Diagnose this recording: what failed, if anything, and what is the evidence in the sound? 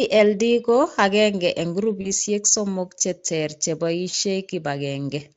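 The failure is in the network path: VoIP packet loss concealed by the speech codec, at 2.01 to 2.12 s and 4.09 to 4.14 s. Each gap is about 40 ms, which fits two lost 20 ms frames. The Speex decoder fills each one by extending the last pitch and filter at falling gain, so the sound smears into a brief buzzy tone or coloured noise that fades. That sets it apart from a buffer underrun, which would give silence or a click. At 2.01 s the weakened, coloured stretch carries on for a while after packets resume. The light, constant Speex coding texture is not the same thing, because it runs through the whole clip instead of appearing in short bursts.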